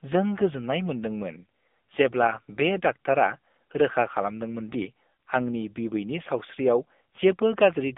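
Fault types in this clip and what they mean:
AMR narrowband mobile codec: a low-rate phone speech codec, here near 8 kbps, leaving a 200 Hz to 3.6 kHz band with plainly audible buzzy, synthetic coloration.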